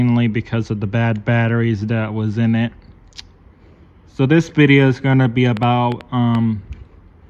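From 5.57 to 6.36 s a train of clicks sits over the sound: roughly five sharp, similar ticks at about 5.1 per second, spaced unevenly rather than in a steady rhythm, and poking out a few decibels above the audio around them. Near-identical pulses repeating for under a second point to something outside the recording injecting them, most likely electrical interference from nearby equipment or a faulty connection or power supply.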